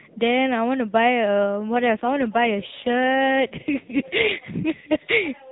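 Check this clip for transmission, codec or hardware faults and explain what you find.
There's one real fault here: an AMR rate drop partway through this speech clip. From about 1.72 s to 5.03 s the voice turns rougher, buzzier and more synthetic, then recovers. The bandwidth doesn't change and nothing cuts out, which is the giveaway. The network has pushed the AMR-NB codec into a lower mode to spend more bits on error protection over a weak link. The extra grit fits a step down from the 12.2 kbps mode heard at the start to about 5.9 kbps. The narrowband mobile sound itself, with nothing above 4 kHz, is just the codec working normally.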